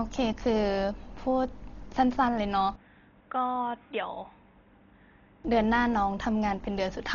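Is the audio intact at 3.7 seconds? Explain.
No. At 3.7 seconds the speech falls inside a stretch from 2.76 to 5.45 s where the input was likely switched to a poorer device. The band stops near 3.8 kHz and the level drops by about 5 dB. A faint new hiss sits well below the voice. There is no gap at either switch. The sound simply turns boxy and dull, then clears.

Under that, the whole clip carries heavy damage that is likely from Dolby Digital compression. Nothing is left above 7 kHz, which fits a bitrate around 32 kbps. Many frequency lines get no mantissa bits and are refilled with dither noise. The result is dull and rough, with fluttering noise around tonal parts of the voice.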